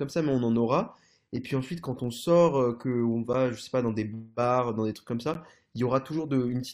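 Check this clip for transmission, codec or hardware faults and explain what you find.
Two faults are present in this speech recording: a filter restarted on every block, running the whole way through, and two short gaps between stream segments.

The filter restarted on every block discards its memory at each block boundary and starts again from silence, so each block opens with a small transient. Repeating 25 times a second, consistent with 40 ms blocks, these form a steady 25 Hz buzz that rises and falls with the speech level.

The two gaps between stream segments, at 3.33 s and 5.34 s, sit at 2-second segment boundaries. Their time stamps don't line up, and the player pads each gap with silence. The result is a hard-edged dropout of about 9.5 ms and then 12.5 ms. No audio is lost; the speech is pushed later.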